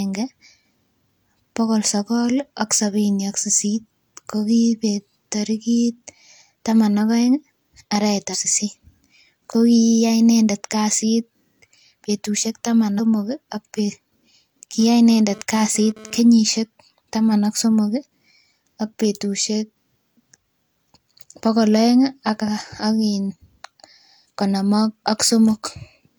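At 8.30 to 8.35 s and again at 12.95 to 13.00 s, the speech briefly breaks up. This is damaged data in a compressed stream. Corrupted bytes make the decoder misread frames and lose sync. It then hunts for the next valid frame header.

From 14.80 to 16.20 s, a hard, raspy GSM phone buzz sits under the speech at about 22 dB below it. A nearby 2G phone was sending data in bursts at 217 Hz. The audio circuit rectified those radio pulses into a harmonic-rich buzz.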